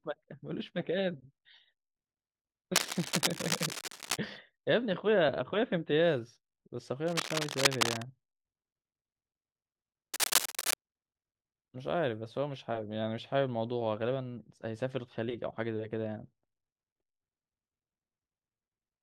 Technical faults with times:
2.75-4.17 cable scratch noise
7.07-8.04 cable scratch noise
10.14-10.74 cable scratch noise

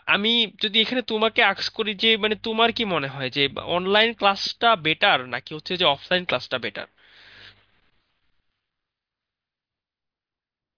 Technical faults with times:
none

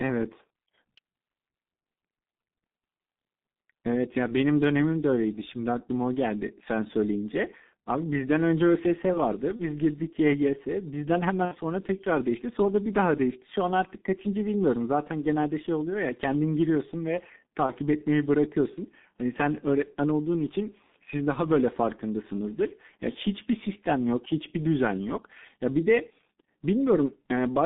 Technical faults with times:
0.00-27.66 G.723.1 codec
9.56-9.66 VoIP packet loss concealed by the speech codec
11.45-11.55 VoIP packet loss concealed by the speech codec
17.66-17.73 VoIP packet loss concealed by the speech codec

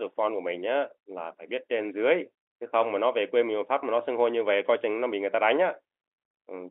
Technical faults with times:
none

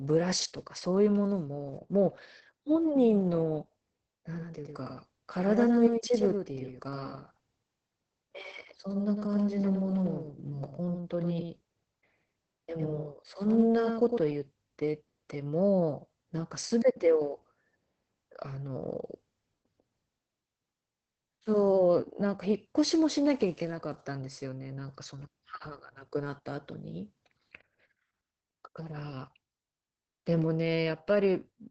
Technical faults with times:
0.00-31.70 Opus voice compression
4.38-14.18 doubled audio track

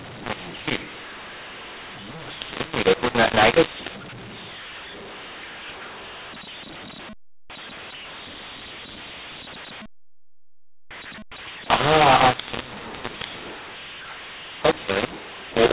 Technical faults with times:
0.00-15.72 mu-law and A-law mixed up

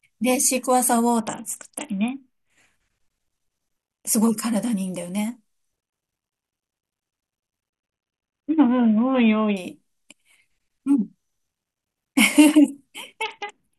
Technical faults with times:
1.20-2.50 Bluetooth SBC bit pool drop
7.70-9.57 Bluetooth SBC bit pool drop
13.23-13.78 Bluetooth SBC bit pool drop

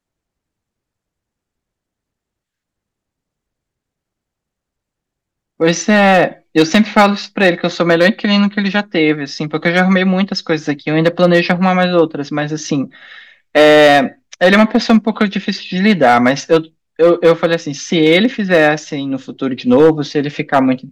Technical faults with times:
0.00-20.91 hard clipping

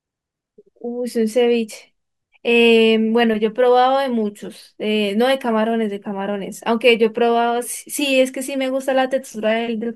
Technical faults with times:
none

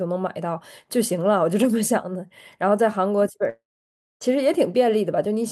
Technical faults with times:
3.49-4.23 long network dropout

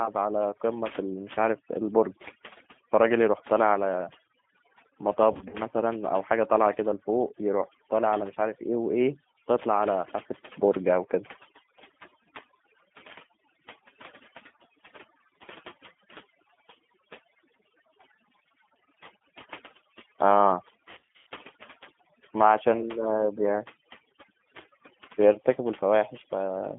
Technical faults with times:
0.00-26.79 overdone noise removal
0.00-26.79 G.729 codec
5.33-5.56 VoIP packet loss concealed by the speech codec
20.91-21.27 VoIP packet loss concealed by the speech codec

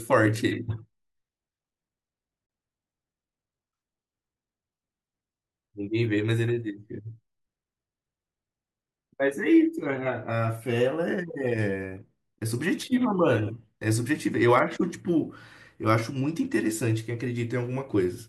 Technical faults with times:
2.47-2.49 gap at a join of encoded pieces

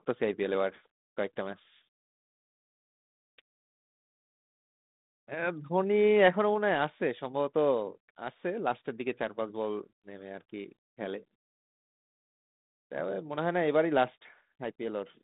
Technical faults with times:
none

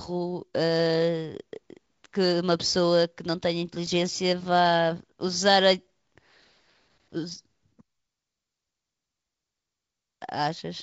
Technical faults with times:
1.86-9.89 periodic USB or driver dropouts

